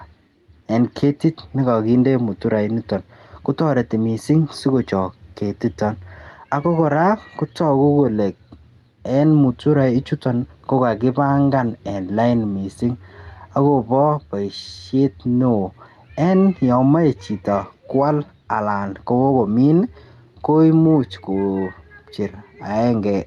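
Gain pumping runs through the whole recording: the gain swings up in the pauses, then drops by around 5 dB each time speech returns, so loud and quiet passages sit unnaturally close in level. The likely cause is input gain set far too high, with a fast limiter clamping each peak. A waveform would show a flattened, near-constant envelope with a raised noise floor between phrases, and the spectrogram's background band would brighten and darken in step with the speech, all beneath the call codec's cut-off around 12 kHz.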